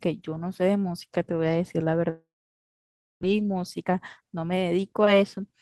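A speech clip with two faults. At 2.09 s the sound breaks up. The last sound is stretched into a fading buzz, then nearly a second of silence follows. Speech returns at 3.25 s with a gap in it. About 0.88 s of speech is simply gone. This is a long network dropout, likely caused by packets arriving late or not at all. The receiver filled the hole as best it could, then gave up. The late arrivals left the receiver holding about a fifth of a second of extra delay. From 3.32 s to 5.23 s it works that off with a jitter buffer speed-up. Tiny slices, each a pitch period or so long, are cut out over and over. The pitch stays put, but the talking runs at about 112% of normal speed. It sounds rushed until the buffer settles back to its target.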